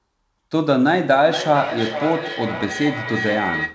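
From 1.25 s to the end of the speech, a feedback howl builds. Two devices in the same room on the call form a loop from microphone to loudspeaker and back that gains level on each trip. Unlike an acoustic echo, whose repeats fade, these grow and narrow into a tone around 2 kHz, with the loop repeating roughly every half second, and peaking about 8 dB below the speech.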